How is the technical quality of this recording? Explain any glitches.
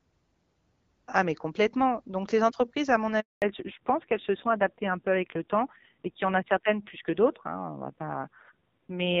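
The recording has two related glitches near the 3 s mark: a brief dropout followed by a permanent loss of audio bandwidth.

Handover gap, 3.20 to 3.42 s: the sound cuts out for 220 ms. While the call was handed from one network to another, no speech frames got through, so the signal fades within a few tens of milliseconds and stays silent until the new link carries audio again.

Fallback to narrowband, 3.42 s to the end: the audio loses everything above 4 kHz and turns duller and rougher. Before this point the sound is clearer and wideband, in line with HD Voice at around 12.65 kbit/s. After the handover the call dropped to an older narrowband codec, and the rougher texture points to a low rate of about 5.9 kbit/s.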